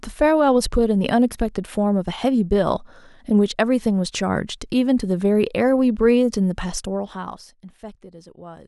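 No technical faults are audible in this speech.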